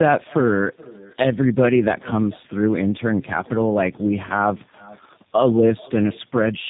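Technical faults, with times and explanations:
Throughout, echo with no canceller: a quieter, thinner copy of the speech trails each phrase by roughly 0.4 s, about 23 dB below the direct signal. The far end's loudspeaker feeds its microphone, and nothing removes that return path.
Throughout, tandem speech coding: the speech sounds rough, muffled and warbly, with nothing above 3.8 kHz. It was decoded and re-encoded by two low-rate speech coders in sequence, consistent with G.723.1 followed by G.729A, each compounding the previous one's damage.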